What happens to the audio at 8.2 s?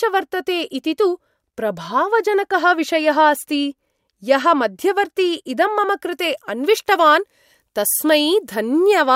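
At 8.2 s the speech sounds thin, bright and hissy on sibilants. This is pre-emphasis left on, running from 6.13 s to the end. The treble boost was never undone by a matching cut, leaving about 8 dB extra at 10 kHz relative to 1 kHz, which fits the CD 50/15 µs curve.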